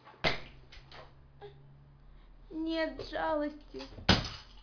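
No technical faults can be heard anywhere in the speech.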